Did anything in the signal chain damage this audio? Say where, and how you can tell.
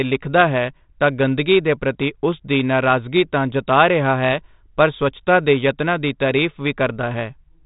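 No, no stage in the chain has damaged this speech. The G.726 ADPCM telephone path is working as designed: nothing passes above about 3.8 kHz, and the light coding texture fits its normal 32 kbit/s mode.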